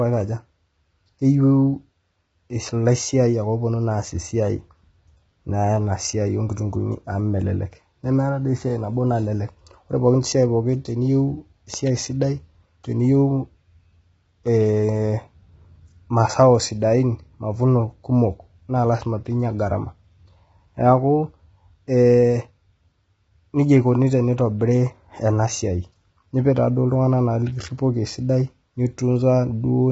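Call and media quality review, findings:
Low-delay AAC compression throughout: rough, grainy speech, noise filling gaps between harmonics, nothing above 7.7 kHz. Likely AAC-ELD at a low bitrate, about 16 kbps. Spectrogram: smeared harmonics, hard ceiling at 7.7 kHz.

Loud pop, 11.74 to 11.89 s, between "ore pookin siai teniyeu" and "esidai teniyeu": two sharp pops, roughly 10 dB above the speech. Likely a voltage step from a plug, switch or static. Waveform: twin spikes; spectrogram: broadband vertical lines.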